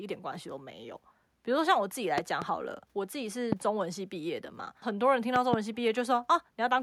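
Loud pops break through the speech at 2.18 to 2.44 s (two), 3.52 to 3.55 s, and 5.36 to 5.56 s (two, the strongest). Each jumps well above the speech, likely from electrical glitches.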